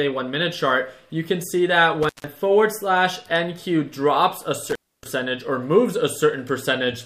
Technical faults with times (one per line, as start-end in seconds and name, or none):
2.03-2.29 intermittent contact
4.69-5.09 intermittent contact